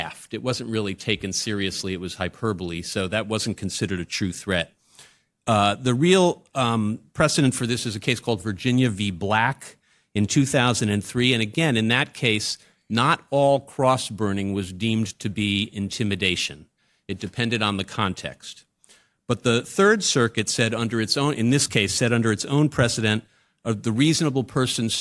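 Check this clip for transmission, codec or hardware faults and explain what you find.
Nothing stood out on listening to this speech recording.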